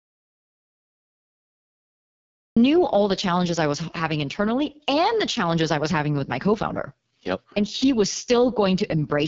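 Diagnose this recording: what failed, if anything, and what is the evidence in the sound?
The speech sounds rough and raspy from start to finish, with nothing above about 7.4 kHz. This is the codec stage: AMR wideband (HD Voice) codec damage at its lowest rate, which fits 6.6 kbit/s, where the pulse-driven vocal tract model is too coarse to render clean speech.

Playback opens in silence with no room tone until 2.57 s, when the speech comes in mid-flow at "all the challenges I". This is an audio dropout to silence at the input or capture stage, likely a lost or muted source while the recorder kept writing silence.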